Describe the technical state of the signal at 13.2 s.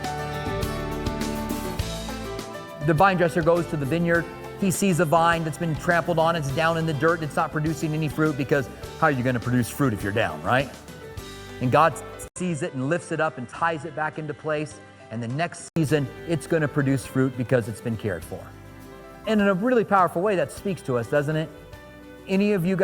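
Input switched to a poorer device, from 12.28 s to 15.76 s, covers the 13.2 s mark. The capture likely moved to a lower-grade input partway through, so the band narrows, with nothing above 10.4 kHz. The audio turns duller and drops by roughly 5 dB, and a new background noise sits well below it. An 80 ms silence marks the changeover at 12.28 s, and the sound stays in this state until 15.76 s.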